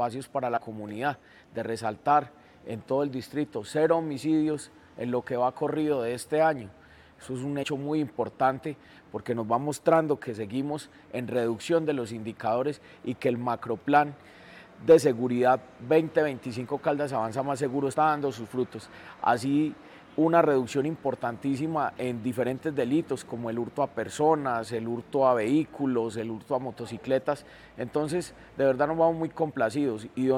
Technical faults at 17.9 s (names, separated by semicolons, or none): compressed frames skipped